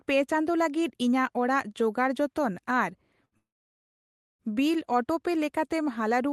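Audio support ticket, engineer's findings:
Burst of packet loss, 3.25–3.34 s: brief fill fading out, about 60 ms of audio skipped. Jitter buffer concealment extending the last frame before playback resumes later.

Long network dropout, 3.37–4.42 s: short fading concealment, then roughly one second of near-silence; about 1 s of audio never arrives. Likely upstream network outage starving the receiver.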